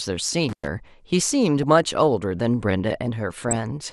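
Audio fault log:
throughout, MP2 compression: The audio is dull and carries a gurgling, granular roughness on the speech. The upper region sounds thinned, with bands seeming to drop in and out, and what remains is coarsely quantised. The likely cause is MPEG Layer II coding at a low rate, which fits a rate of about 80 kbps. The sub-band allocator runs short of bits, switches off the top bands and leaves the rest with too few steps to render detail cleanly.
0.49 to 0.68 s, intermittent contact: The signal drops out abruptly, with crackle at the break and again at the reconnection. The gap itself lasts about 0.11 s and leaves only faint hiss. This is a loose plug or cable momentarily opening the circuit. The programme feed disappears while the line is open, and the contact parting and closing produces the crackle at either edge.
1.63 s and 3.48 to 3.77 s, DAB burbling: At 1.63 s a brief burst of burbling appears. 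From 3.48 to 3.77 s a longer stretch of burbling sits over the speech. Bit errors, at a low rate of a small fraction of a percent, have slipped past error correction into the coded audio. Corrupted samples put short blips of noise in single sub-bands, and corrupted scale factors make sub-bands leap in level for up to a frame, giving the burbling texture.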